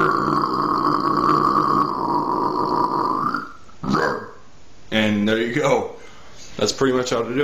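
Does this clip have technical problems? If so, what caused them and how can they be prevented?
No, nothing in this clip points to a technical problem, so there's nothing here that needs preventing.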